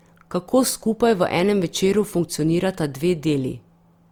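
Speech that carries low-bitrate audio saved at a high bitrate throughout: the sound keeps the coarseness of an earlier low-bitrate encode, likely an Opus encode near 32 kbit/s re-saved as a roomy MP3. Unlike plain low-bitrate audio, the band extends to 20.2 kHz, while the earlier damage remains.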